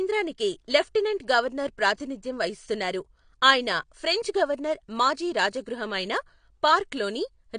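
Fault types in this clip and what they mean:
AAC compression: likely low-bitrate AAC-LC coding; the speech sounds dull and smeared, and a spectrogram shows nothing above 9.8 kHz.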